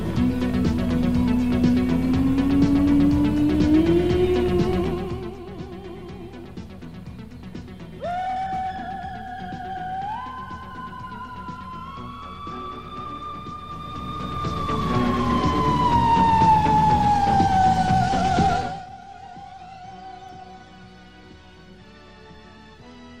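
From 13.56 to 14.86 s a fast ticking, zipping texture rides on the sound as its level shifts by roughly 15 dB. This is zipper noise: the gain moves in coarse jumps, around 50 a second, without smoothing, so each jump leaves a small click.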